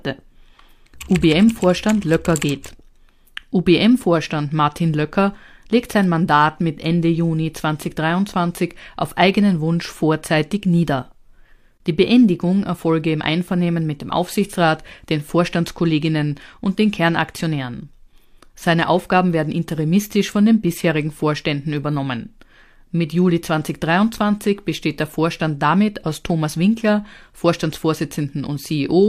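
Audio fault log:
No faults detected anywhere in the speech audio; nothing to log.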